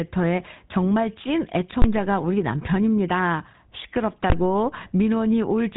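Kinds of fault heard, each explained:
GSM full-rate codec: The whole clip has been squeezed through the old 13 kbps GSM speech coder, which rebuilds the voice from a vocal-tract model fed by sparse, evenly spaced pulses. That gives the speech a plainly audible buzzy, gravelly edge, and nothing gets through above about 3.8 kHz, so it sounds dull and phone-like.
Invalid numbers at full scale: Twice, some processing step spat out infinite or invalid values that got pinned to the largest possible sample, first from 1.82 to 1.84 s and again from 4.30 to 4.32 s. Each is a 20 ms block held flat at one extreme value, so you hear each one as a single loud bang.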